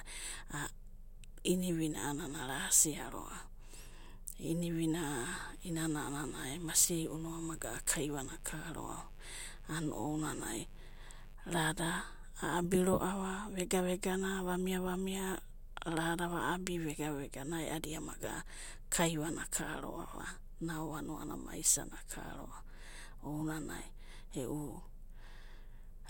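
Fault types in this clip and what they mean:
Mains buzz: a steady, raspy buzz sits under the speech from 5.28 to 11.35 s, roughly 25 dB below it. Sharp switching spikes, twice in each 50 Hz cycle, leak in and spread harmonics up into the kilohertz range.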